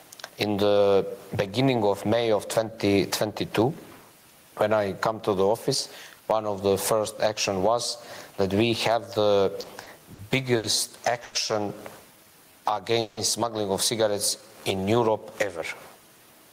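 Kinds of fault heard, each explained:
Gain pumping: Throughout the speech the level is squeezed by something like 15 dB. The likely cause is input gain set far too high, with a fast limiter clamping every peak.
Short stall from a late packet: At 9.61, 9.83, 10.14 (after "that we have the") and 10.57 s a sound is briefly held, for 20, 30, 50 and 70 ms, as the receiver stretches the last audio while waiting for an overdue packet, then resumes where it left off.
Call audio freeze: At 11.24 s and 13.01 s the speech stops moving forward for about 110 and 160 ms, continuing as a fading buzz or hiss before resuming unchanged, likely because held-up packets emptied the jitter buffer and the receiver had to fill the wait.
Jitter buffer slow-down: From 12.11 to 12.94 s, ending at "smuggling of cigarettes", and from 14.38 to 15.11 s, the speech drags at the same pitch, to 91% and 85% speed, as repeated pitch periods rebuild the buffer's reserve, adding 84 and 116 ms.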